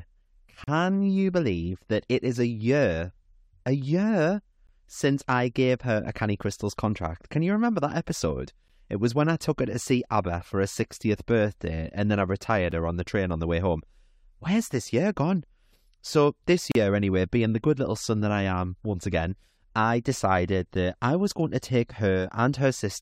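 Gaps between stream segments cut the speech at 0.64–0.68 s, 4.67, 8.68, 12.71, 16.72–16.75 and 20.75 s, about every 4 s. Segment timestamps leave holes of roughly 6 to 38 ms that play as hard-edged silence. Unlike a dropout, nothing is lost, and the speech resumes exactly where it stopped.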